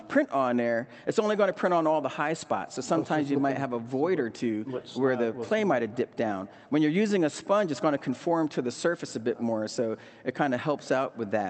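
No technical faults can be heard: the audio has passed through a call path whose high end stops at about 8 kHz, which fits a wideband Opus setting near 32 kbps, and it carries only the ordinary coding character of such a link.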